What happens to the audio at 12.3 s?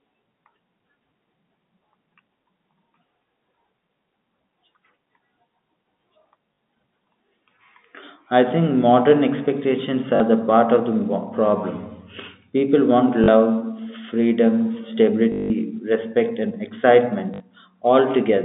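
Nothing goes wrong at 12.3 s: the speech there is intact, carried cleanly through the G.711 telephone coding with its usual narrow phone-line band.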